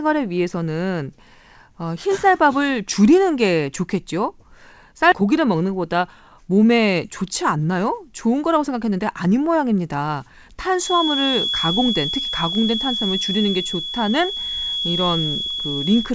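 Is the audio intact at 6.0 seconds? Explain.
No. From 5.22 to 9.71 s a jitter buffer speed-up trims pitch-period slices, about a third of a second in total, so the speech runs about 7% fast at unchanged pitch and sounds hurried.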